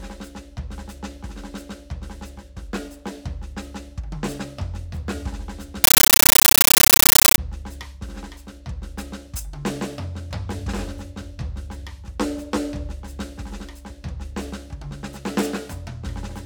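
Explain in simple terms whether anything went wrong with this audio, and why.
From 5.84 to 7.38 s, a compressed stream was played as audio. The music's encoded Dolby Digital data was sent out as sound instead of being decoded. Each data frame becomes a 13.3 ms burst of harsh static, 31 times a second, replacing the music with loud chattering noise.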